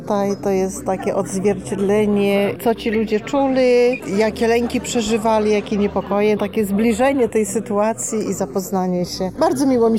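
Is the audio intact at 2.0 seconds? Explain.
No. Channels drifting apart affects the whole clip, 2.0 s included: the channels run on clocks roughly 40 ppm apart, so their delay slides, and summed to mono this is heard as slow flanging.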